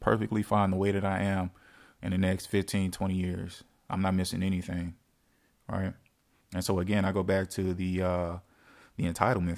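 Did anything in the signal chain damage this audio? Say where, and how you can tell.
No, nothing in the signal chain stood out as damaging on listening.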